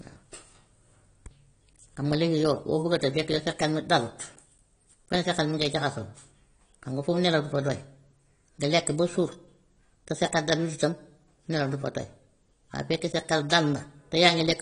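Likely AAC compression, an AAC-LC encode at a low bitrate (the damage fits roughly 32 kbps), affects this speech recording throughout. Nothing remains above 10.1 kHz, so the sound is dull and smeared, with a plainly audible warbling, fizzy texture on sustained sounds and sibilants.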